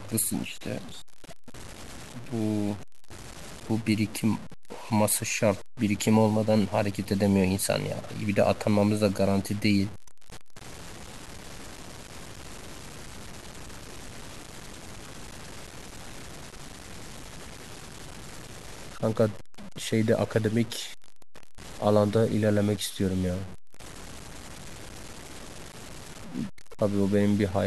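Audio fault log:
Throughout, low bit depth without dither: grainy distortion that tracks the speech, with quiet passages turning gritty and the softest moments sputtering or dropping out. The likely cause is truncation to a coarse grid of around 6 bits, leaving error near 20 dB below the signal.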